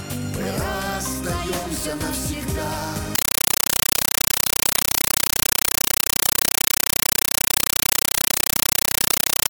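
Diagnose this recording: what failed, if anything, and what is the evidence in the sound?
From 3.15 s to the end, the sound is replaced by very loud, harsh static that chatters at a steady 31.25 times a second, each burst about 8 ms long with silence between. This is a compressed stream played as audio at the playback stage: an AC-3 (Dolby Digital) bitstream, which fits 384 kbps, was passed over the digital link as though it were PCM samples. Each coded frame comes out as a noise burst followed by zero padding.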